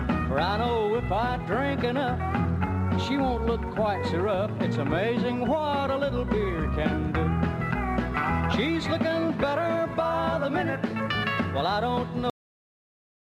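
It's got a cut-off end: at 12.30 s the sound stops dead mid-event and drops straight to digital silence with no decay, because the final buffers never got written out.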